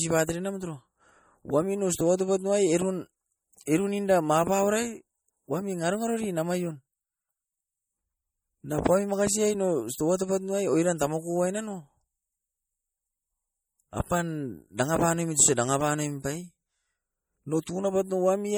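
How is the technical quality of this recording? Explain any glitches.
The quality's held back for the whole clip. It sounds like low-bitrate audio saved at a high bitrate. The content stops near 20.2 kHz, but the low-bitrate coding texture is still there, likely from an MP3 around 48 kbit/s later re-saved as an MP3 near 253 kbit/s. The bigger second encode can't restore what the first threw away.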